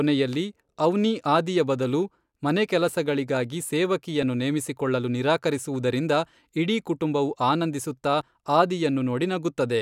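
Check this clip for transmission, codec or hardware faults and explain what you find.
Two brief splice faults appear in this speech, both from overlap between stream segments. At 4.23 s, just before "ನೇಮಿಸಿಕೊಳ್ಳಲು ನಿರಾಕರಿಸುವುದರಿಂದ ಇಡೀ ಕುಟುಂಬವು", and at 8.21 s, right after "ನಿರಾಕರಿಸುವುದರಿಂದ ಇಡೀ ಕುಟುಂಬವು ಆನಂದಿಸುತ್ತಾ", adjacent 2-second segments claim overlapping time, so the player trims real audio and the waveform jumps. Each is a tiny skip. Unlike a dropout, there's no silent gap, only missing sound.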